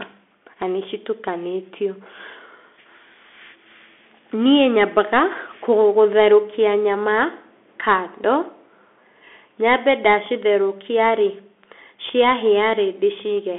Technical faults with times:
0.00-13.59 Bluetooth CVSD headset codec

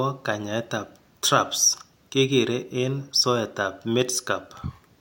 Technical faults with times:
none

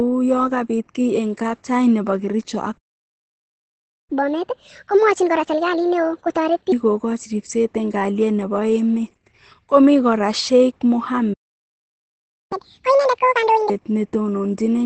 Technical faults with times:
0.00-14.86 Opus voice compression
2.77-4.10 playback stall
4.10-6.72 catch-up at higher speed
11.33-12.52 playback stall
12.52-13.70 catch-up at higher speed

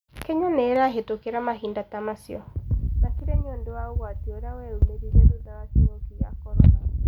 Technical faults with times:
0.76 dropped samples
4.82 dropped samples

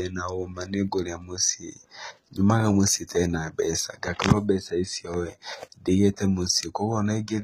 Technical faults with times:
0.00-7.43 HE-AAC compression

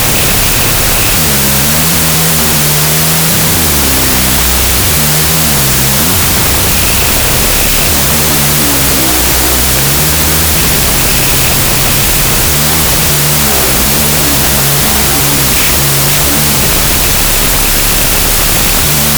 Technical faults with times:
0.00-19.18 wrong sample width

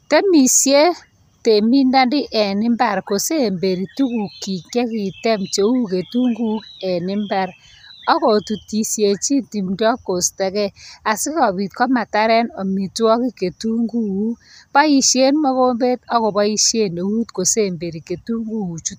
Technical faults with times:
none

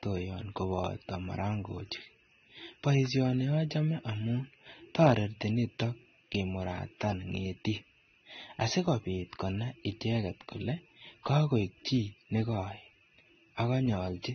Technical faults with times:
0.00-14.35 transcoding between lossy codecs

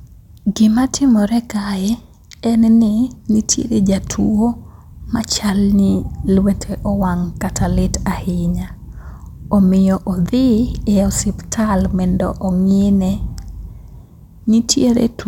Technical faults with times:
none

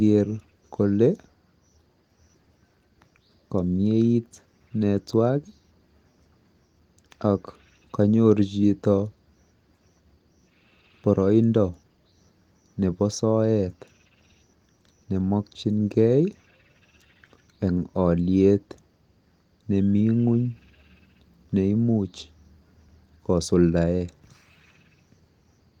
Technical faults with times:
none

